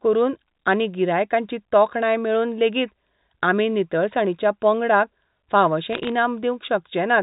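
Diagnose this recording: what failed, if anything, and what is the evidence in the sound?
A brief burst of sharp ticks and crackle runs from about 5.93 to 6.09 s, just after "आमी नितळसाणीच्या पंगडाक फावशें", over otherwise unchanged speech. This is bit errors on a digital phone line, a network-stage fault: scattered flipped bits, around a few per thousand, each corrupt one sample of the G.711 A-law stream, and hits on sign or high bits produce the clicks.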